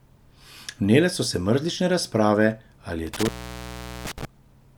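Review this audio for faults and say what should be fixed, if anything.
There's an intermittent contact between 3.07 and 4.25 s: the speech drops out for roughly 0.77 s with crackle at both edges and faint hiss underneath, which is a loose plug or cable briefly opening the line. Reseat and secure connectors, and swap any worn cable.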